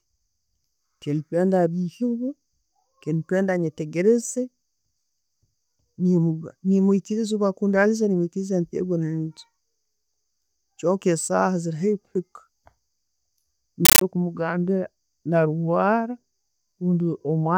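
From 13.85 to 14.01 s the speech is replaced by a burst of very loud, chattering static just before "kumugambira narwara". It is a compressed stream played as audio: AC-3 data, likely at 640 kbps, was treated as samples, giving 13.3 ms noise bursts 31.25 times a second.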